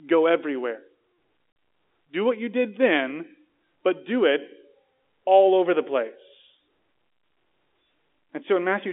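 At 1.52 s the speech drops out for 40 ms, to 1.56 s: packet loss filled with silence. The gap fits two lost 20 ms packets replaced by digital silence, so it has hard edges rather than the smeared, repeated sound concealment leaves.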